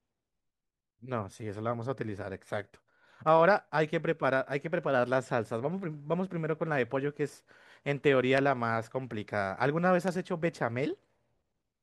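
A click recurs at a steady interval of about 0.85 s through the speech, from 0.73 s to 11.78 s, some fifteen times in all. These are likely clock drift buffer slips: two devices running on separate clocks that disagree by roughly 200 parts per million, so the buffer between them creeps toward full or empty until a few samples, around seven, are dropped or repeated, leaving a discontinuity each time.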